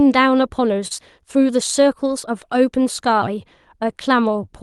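At 0.87 s there is a short concealed packet loss, lasting until about 0.99 s. About 20 ms of the speech never arrived in time. The receiver covered the gap with roughly 31 ms of made-up audio, stretching out the sound that came just before and then blending back into the real signal. It is heard as a brief smear or wobble in the speech. The call codec's band limit, which sits near 12 kHz, stays in place across the repair.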